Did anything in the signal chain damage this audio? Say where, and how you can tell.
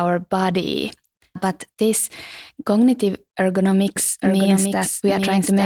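Yes: a doubled audio track runs from 3.96 s to the end, as a dry, full-band copy about 5 dB quieter trailing roughly a second behind, likely from a slower second capture path.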